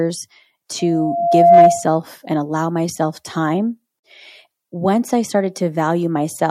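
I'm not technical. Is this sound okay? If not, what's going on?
No. A microphone picked up its own loudspeaker, causing loudspeaker feedback squeal: from 0.79 to 1.88 s, a 687 Hz tone swells over most of a second, ending just before "and allow myself time".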